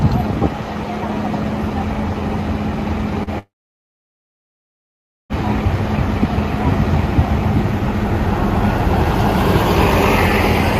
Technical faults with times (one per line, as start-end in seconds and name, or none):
3.23-3.30 short concealed packet loss
3.39-5.33 long network dropout